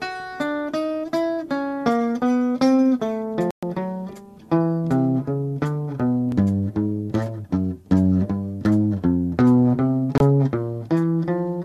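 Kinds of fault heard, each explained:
Digital broadcast dropout: The receiver lost valid frames and muted until good ones returned. The sound goes silent from 3.51 to 3.63 s, which fits about five lost frames. A shorter hole follows at 10.18 to 10.21 s. That audio is lost.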